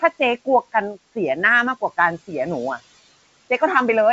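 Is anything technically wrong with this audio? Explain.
Yes, there are noise suppressor artifacts running through the whole clip. The suppressor is estimating the steady room noise and pulling those frequency bands down frame by frame, by about 17 dB at its deepest. That makes the background dip away in the gaps between phrases and creep back up underneath the speech. The G.722 coding stays clean, with nothing above 7.7 kHz.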